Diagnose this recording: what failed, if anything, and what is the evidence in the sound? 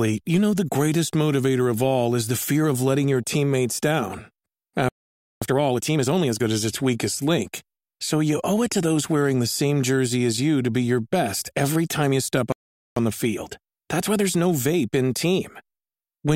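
Playback stall at the playback stage: the speech goes silent from 4.89 to 5.42 s and 12.52 to 12.96 s, likely a starved buffer.

Time-compressed catch-up follows each stall: 5.42 to 6.46 s runs 1.5 times fast, 12.96 to 15.96 s 1.1 times, with pitch held, unlike resampled speed-up.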